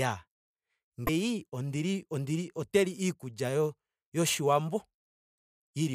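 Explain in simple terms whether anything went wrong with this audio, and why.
At 1.06 s, for about 30 ms, the speech skips ahead with a brief chirp, burst of noise or gap, just before "ondili ondili ote". This is likely a broken MP3 bit reservoir. Audio was cut out, and the next frame borrowed data that was gone.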